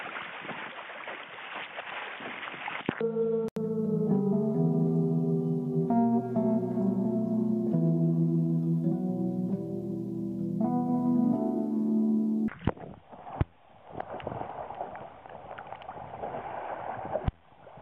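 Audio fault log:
0.00–3.56 s, input switched to a poorer device: dull, boxy sound with nothing above 3.9 kHz and faint extra hiss, then an 80 ms gap, likely the switch back to the main mic.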